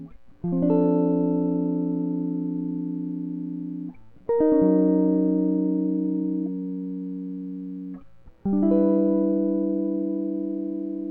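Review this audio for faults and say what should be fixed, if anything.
Nothing needs fixing; no faults are audible in the music.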